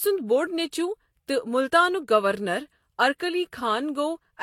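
Right through the clip, the speech carries two layers of lossy-codec artefacts at once: smeared, watery highs alongside the swirly, synthetic sheen of spectral band replication. That combination is most likely transcoding between lossy codecs, with something like Vorbis around 43 kbit/s feeding HE-AAC at roughly 40 kbit/s. The second encoder wastes bits reproducing the first one's damage while adding its own. The band still reaches about 23.5 kHz, so the problem is texture, not a low cut-off.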